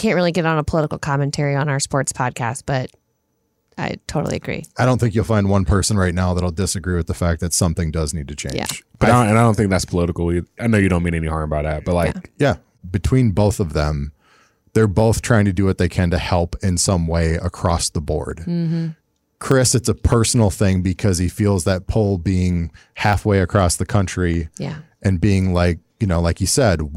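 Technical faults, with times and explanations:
0.24 to 26.75 s, clock drift buffer slips: a click recurs every 0.60 s through the speech, about fifty in all. Each likely marks a few samples dropped or repeated as two clocks, a few hundred ppm apart, let the buffer drift.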